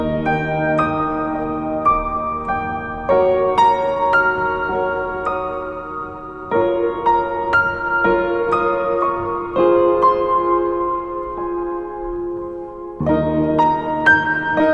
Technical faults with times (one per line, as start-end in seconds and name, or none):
none